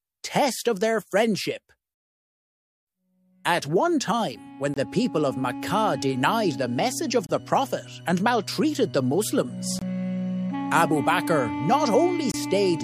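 A gap between chunks first opens at 4.74 to 4.77 s, then repeats at 7.27 to 7.29 s, 9.79 to 9.82 s and 12.32 to 12.34 s, each about 25 ms long and spaced 2.5 s apart. The audio was delivered in 2.5 s blocks, and each join leaves a brief stretch of silence rather than flowing straight on. Nothing is missing, but each hole has hard edges and lands at the same regular spacing, giving a periodic interruption.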